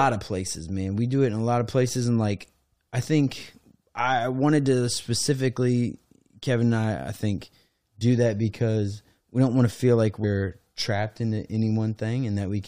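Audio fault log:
8.00 s, compressed frames skipped: the decoder never played about two frames of the compressed stream, each roughly 23.2 ms long, so around 50 ms of speech vanishes between "I I think" and "that because we don't".
10.23 s, compressed frames skipped: a longer gap of about four frames removes roughly 100 ms between "want to feel like" and "trapped into".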